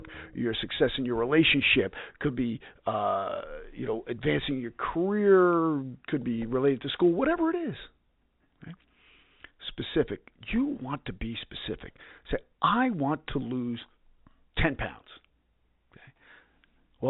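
No technical faults occur in this speech, which carries the narrow, telephone-band sound of G.711 coding.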